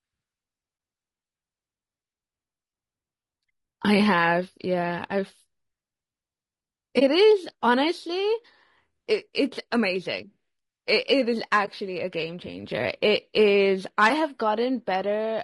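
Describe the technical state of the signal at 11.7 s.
At 11.65 to 11.69 s the speech drops out in a brief dip: AAC frame loss with muting. The decoder had nothing for that stretch and set the spectrum to zero, so the overlapping transform windows fade the sound down and back up rather than cutting it. The length fits one lost frame of about 20 ms. Unlike a hard dropout or buffer underrun, it is just a brief, smoothed gap.

Underneath, the speech carries plainly audible codec damage throughout, likely from low-delay AAC compression (AAC-ELD) at a low bitrate around 32 kbps. The very short frames resolve pitch harmonics poorly, so the voice sounds rough and grainy, with noise filling the spaces between harmonics and a dulled or synthetic-sounding top band. This grain is present continuously, which separates it from the momentary gap at 11.7 s.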